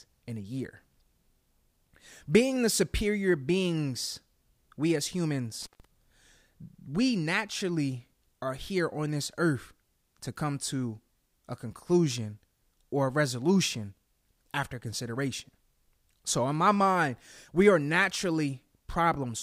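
Right after "superior beings we as", around 5.61 to 5.85 s, there's an intermittent contact: a loose plug or cable briefly losing connection. The sound drops out for about 143 ms, with crackle at either edge as the contact breaks and then reconnects.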